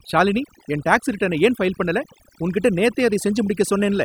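Overdone noise removal runs through the whole of this speech clip, from start to finish. A noise reduction stage set far too aggressively treats any frequency band sitting close to its noise estimate as disposable, pulling it down hard or removing it entirely. Low-level parts of the voice fall below that threshold and vanish along with the noise. What remains is a lowered background sprinkled with twinkling, isolated specks.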